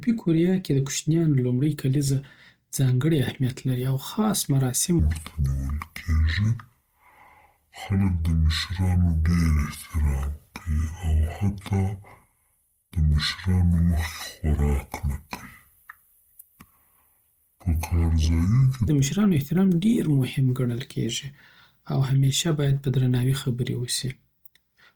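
From the start and through the whole clip, the speech carries plainly audible Opus compression, likely from encoding in its music (CELT) mode at a rate that fits around 24 kbps. Bands short of bits are refilled with folded or noise-like content, so the voice turns grainy and rough rather than swirly. The full band is kept, with nothing above 20.2 kHz. On a spectrogram the upper bands look speckled and noise-textured instead of showing clean harmonic lines.

From 4.99 s to 18.88 s a section at the wrong speed plays at 0.577 times its original rate, likely because it was played against a mismatched clock. Speed and pitch fall together, by about ten semitones, so the speech becomes deep and slow, then snaps back at 18.88 s. On a spectrogram the harmonics and formants in that span sit visibly lower and more tightly spaced. In the waveform the syllable envelopes are drawn out in time.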